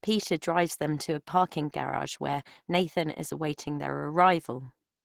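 Throughout the speech, Opus compression is plainly audible, likely from a low-rate encode around 16 kbps in hybrid mode. The sound is hoarse, rough and grainy rather than swirly: filled-in bands give noise instead of the bubbling holes that set MP3 damage apart.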